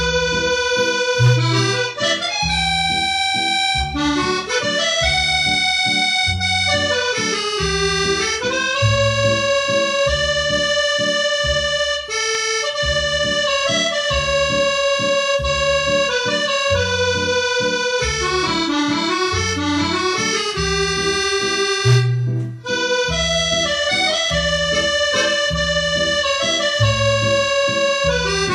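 Two sharp clicks, at 12.35 s and 24.30 s, likely come from dropped samples: a tiny fraction of a millisecond of the stream goes missing, so the waveform steps abruptly to a later value. Nothing audible is lost, but each click shows as a thin vertical line across the spectrogram.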